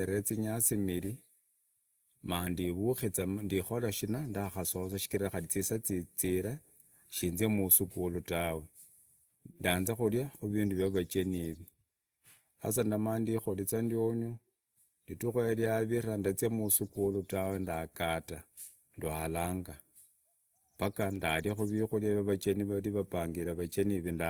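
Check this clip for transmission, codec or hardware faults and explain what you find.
One codec fault runs through the whole clip. The speech sounds grainy and rough, with a noisy fizz on its tones, yet the top end stays open to about 20.2 kHz. This is likely Opus compression in its music mode, which keeps every band's energy but fills starved bands with folded or noise content, which fits a rate near 24 kbps.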